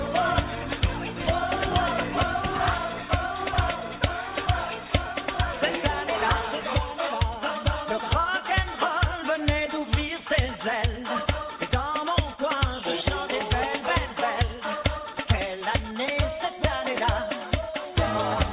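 No technical faults can be heard anywhere in this recording.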